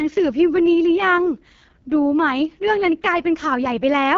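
From start to end the speech carries AMR wideband (HD Voice) codec damage, heavy enough to point to the lowest 6.6 kbit/s mode. The model-based coding sounds rough and raspy. On a spectrogram, energy stops sharply near 7.1 kHz, with smeared, noisy bands just below it.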